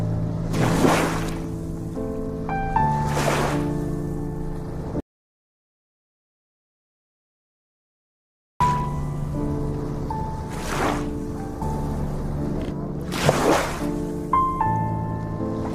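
The sound cuts to silence from 5.00 to 8.60 s, with no room tone. This is an audio dropout to silence. About 3.6 s is lost. Likely cause: the input link failed while recording continued.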